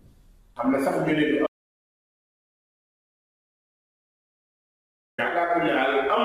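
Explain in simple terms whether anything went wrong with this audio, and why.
An audio dropout to silence runs from about 1.47 s to 5.18 s, so roughly 3.7 seconds of the recording are simply gone. The sound cuts off mid-flow and then returns just as abruptly. In between there is total silence, with not even the faint background hiss a quiet room leaves. That dead silence is the telltale sign. The likely cause is that the input briefly disconnected or was muted while the recorder kept writing blank audio.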